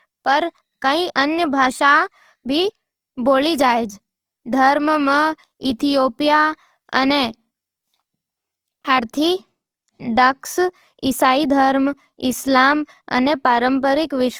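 The speech is grainy and rough throughout, not swirly like MP3, with treble still reaching 20.2 kHz. This is likely Opus compression, and the sound fits 24 kbps.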